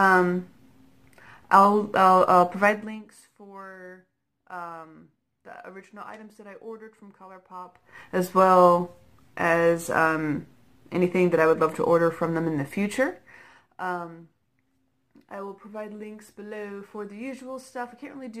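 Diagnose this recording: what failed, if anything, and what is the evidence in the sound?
Zipper noise appears between 2.62 and 3.12 s as a fast ticking riding on the sound while its level drops by roughly 20 dB. The gain is being stepped rather than ramped, in 2 dB increments at about 30 steps per second, so each jump leaves a small click. That points to the driver or buffer stage, with gain updated once per block and no interpolation between blocks.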